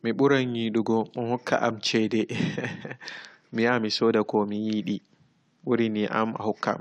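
No technical faults can be heard anywhere in the speech. Nothing in the recording or playback chain intrudes at any point.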